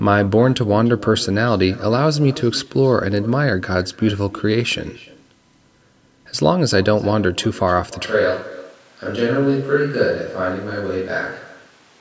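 From the start, every phrase is trailed by a faint, thin copy of itself arriving around a third of a second later, sitting about 19 dB below the direct speech. That is echo with no canceller: the far end played the call through a loudspeaker, its microphone caught the sound, and nothing subtracted it before it travelled back, so the talker hears their own voice return after the network round trip.

At 8.06 s the sound changes abruptly and stays that way to the end. The voice turns hollow and roomy, loses bass, drops a few decibels in level, and a faint bed of room noise becomes audible well beneath the speech. The sudden shift points to a switch to a distant microphone, likely because the close microphone's feed failed or was dropped and a farther one, such as a camera's, took over. The call microphone processing, with its top end ending at 8 kHz, can be heard working as expected under both faults.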